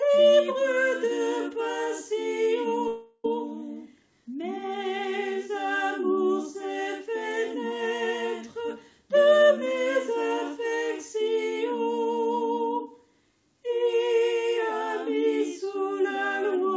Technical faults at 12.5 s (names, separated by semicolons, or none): none